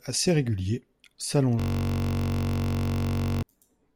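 From 1.60 s to 3.43 s the speech gives way to a steady, rough buzz at about 47 Hz. This is a system hang loop: playback froze while the hardware kept replaying one 21.33 ms piece of audio, which fits a 1024-sample ring buffer.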